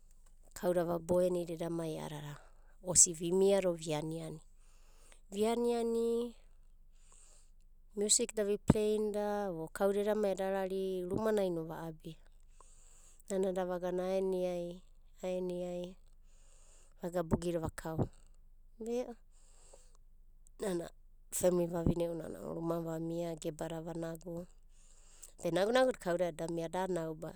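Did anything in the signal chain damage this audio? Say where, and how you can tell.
No, nothing in the chain damaged it.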